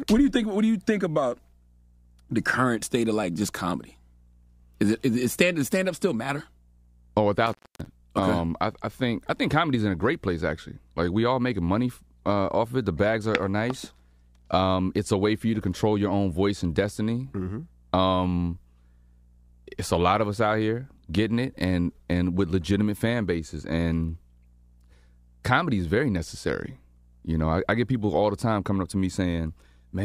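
At 7.47 s the speech drops out in an intermittent contact, a loose connection opening for about 265 ms before closing again by 7.86 s. Crackle marks both edges, with faint hiss in the gap: a near-flat waveform between spiky edges, vertical broadband streaks on a spectrogram.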